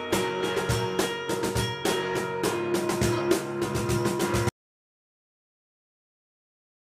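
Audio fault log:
4.49 s to the end: audio dropout to silence. The sound just stops mid-flow and what follows is dead silence, not even room tone, so whatever came after is gone. Most likely the input got disconnected or muted while the recorder kept running.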